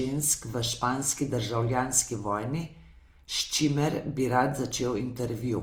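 From start to finish the speech carries a grainy, rough texture, with tonal parts smeared into noise though the top end stays open up to about 20.2 kHz. That's likely Opus compression in its CELT music mode, noise-filling starved bands at something near 24 kbps.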